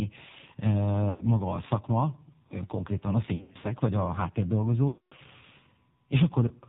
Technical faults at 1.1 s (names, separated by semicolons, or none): AMR narrowband mobile codec; lost AMR speech frames